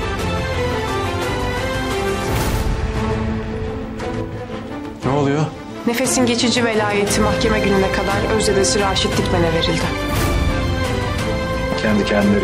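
From 2.31 s to 4.21 s the audio carries a doubled audio track: a second, full-band copy trails the original by roughly 150 ms at about 5 dB lower, with no decay or room colour, switching on and off abruptly. A slower parallel capture path is the likely cause.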